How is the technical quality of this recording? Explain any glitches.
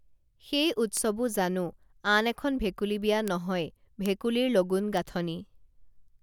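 The speech carries four sharp ticks, each a bit error spike: at 0.97 s, just before "জানো আন এখন ভেকুলী", peaking about -14 dBFS; at 3.28 s and 4.06 s, about -8 dBFS; and at 4.97 s, about -14 dBFS. A single flipped bit throws one sample, or two at 0.97 s, off by a power of two before snapping back. On a waveform each shows as a lone needle, and on a spectrogram as a thin full-height vertical line unrelated to the speech.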